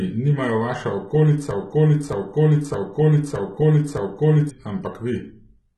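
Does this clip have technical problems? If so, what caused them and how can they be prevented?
Yes. Heavy HE-AAC compression runs through the whole clip. The treble is rebuilt by copying lower bands upward, so s sounds turn gritty and metallic, and nothing survives above 11.8 kHz. The damage fits a bitrate around 16 kbps. On a spectrogram, the upper band looks blocky and repetitive and stops at a hard ceiling. To prevent this, encode at a higher bitrate or with plain AAC or Opus instead of HE-AAC.

A broken-record loop runs from 1.51 to 4.50 s. A 0.62 s fragment repeats exactly, five times back to back, and the audio that belonged there is lost. This is likely a stalled player or stream that kept resending its last fragment. The waveform shows identical blocks lined up side by side, and the spectrogram shows matching repeated tiles. To prevent this, use stream and player buffering that drops out cleanly on a stall instead of replaying old data.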